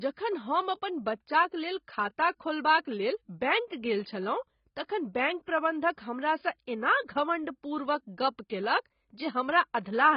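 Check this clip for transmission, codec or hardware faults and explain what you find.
Two codec faults are audible: heavy compression damage across the whole speech clip, and one pre-echo event.

The AAC compression runs throughout. Nothing is present above 5.1 kHz, so the speech sounds dull and smeared, with a warbling, fizzy texture on sibilants. The likely cause is AAC-LC starving its frequency lines of bits at a low rate that fits about 16 kbps. Unlike a plain low-pass filter, it also leaves spectral holes and swirling artefacts below the cut-off.

The pre-echo falls at 5.46 to 5.48 s. A short hiss, about 24 ms long, comes just before a sharp attack, and the attack itself sounds softened. The codec spread the noise meant for the loud onset across its whole transform block, including the quiet moment before it. Unlike a click or dropout, the hiss comes ahead of the transient, not after it.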